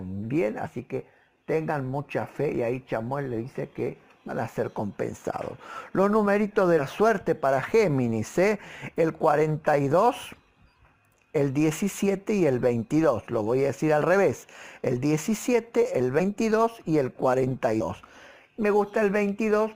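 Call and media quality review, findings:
Compressed frames skipped at 0.66–0.70, 2.54–2.56, 4.27–4.32, 6.78–6.81, 10.26, 14.01–14.04, 16.19–16.22, 17.80 s. Short spots where the audio jumps ahead by a few tens of milliseconds, consistent with 10 ms frames dropped in decode.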